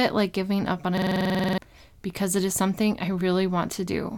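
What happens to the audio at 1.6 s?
At about 1.6 s the system hang loop is just ending. From roughly 0.98 to 1.58 s, after "like giving up on", a frozen system kept replaying one 46 ms buffer (fits 2048 samples), giving a machine-gun stutter at 21.5 Hz. Around 0.7 s is lost before "because it is something".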